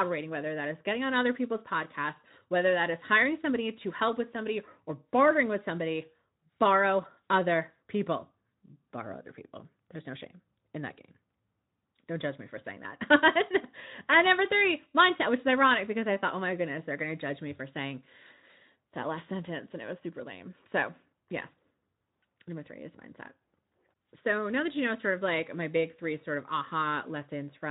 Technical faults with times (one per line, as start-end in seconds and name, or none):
none